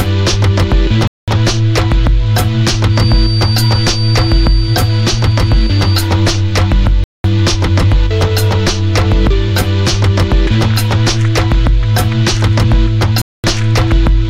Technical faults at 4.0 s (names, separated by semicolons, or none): feedback whistle